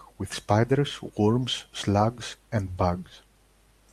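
No technical faults can be heard anywhere in this speech recording, and the signal stays steady and intact throughout.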